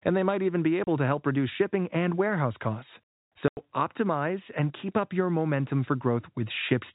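Packet loss filled with silence breaks the speech at 0.84 s, between "they might even be" and "to help reduce shipping", and again at 3.48 s, after "shipping and warehouse costs" and before "optimize and keep up". Audio went missing, and the receiver put dead silence in its place: a 30 ms hole, then a 90 ms one. Both fit 30 ms packets, one lost and then three in a row. Each gap starts and stops abruptly, under the band-limited telephone sound of G.711.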